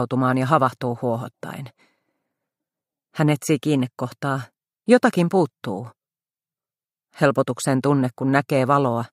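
Nothing to flag: no dropouts, clicks, glitches or level problems are audible anywhere in the clip.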